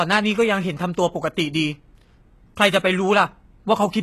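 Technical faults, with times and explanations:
Throughout: HE-AAC compression is the likely cause of gritty, metallic sibilance from treble rebuilt by band replication. The spectrogram shows copied high bands, empty above 12.3 kHz, fitting roughly 16 kbps.
2.56 s: pre-echo, where codec noise spreads about 12 ms ahead of a sharp attack, softening it. The waveform shows a short hiss before the onset; the spectrogram shows a smeared broadband haze.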